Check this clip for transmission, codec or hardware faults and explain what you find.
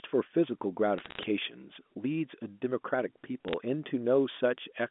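Two short bursts of bit errors on a digital phone line stand out, at 0.98 to 1.23 s and 3.48 to 3.54 s, over a band-limited G.711 A-law telephone signal. Flipped bits, at a rate of a few tenths of a percent, each corrupt a single logarithmic sample, so hits on the sign or upper bits jump to a wrong value and snap back as sharp ticks, heard as crackle over the speech. Unlike packet loss, nothing drops out or repeats.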